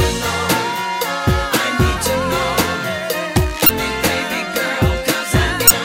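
Two short bursts of damaged data in the compressed stream break up the audio, one at about 3.66 to 3.70 s and another at 5.67 to 5.72 s. Each is a brief blip where the decoder hit corrupted bytes, lost sync and had to hunt for the next good frame header.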